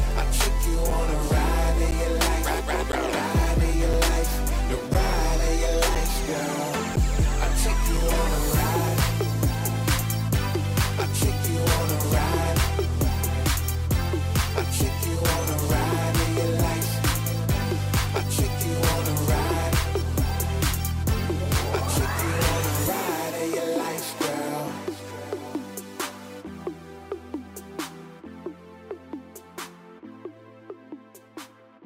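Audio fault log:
0.90, 1.91, 2.92, 3.93, 4.94, 5.95 and 6.96 s: gap between stream segments. Hard-edged silent holes of 6 to 12 ms recur at roughly one-second spacing, matching 1.0 s segment boundaries whose timestamps leave a small gap. The player pads each with silence, delaying the audio slightly without losing any.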